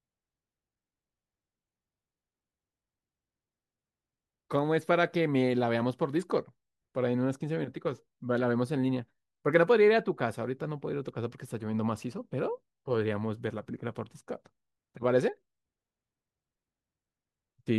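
Nothing stood out on listening to this speech recording.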